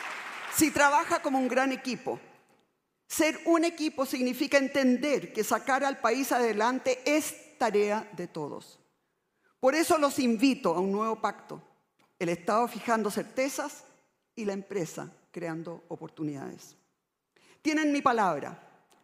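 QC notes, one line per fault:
No faults found in this clip.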